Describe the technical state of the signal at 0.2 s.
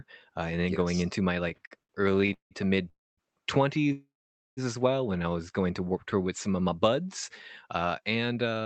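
At 0.2 s the speech is intact with no fault present, having passed through an Opus call path whose band-limiting to around 8 kHz is normal for that codec setting.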